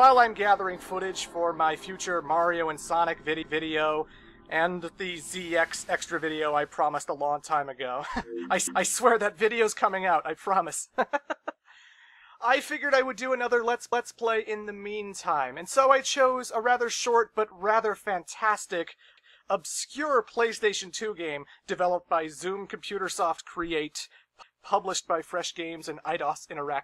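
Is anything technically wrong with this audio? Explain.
Yes. The audio suffers from overlapping chunks: it was handled in blocks of about 5 s, and each new block began 250 ms before the previous one had finished, so that stretch is replayed at every join. The joins fall at 8.67, 13.92, 19.17 and 24.42 s, roughly every 5.25 s. Each is heard as a quarter-second stutter, a brief repeat with a click at the seam, recurring on a steady rhythm.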